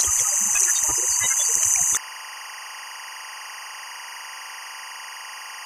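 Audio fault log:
throughout, timecode bleed: a chirping warble sits behind the sound, roughly 15 dB below it, flipping between pitches around 1 kHz and 2 kHz. Linear timecode at 23.976 frames per second is leaking from a neighbouring track or cable, its square wave alternating between both pitches.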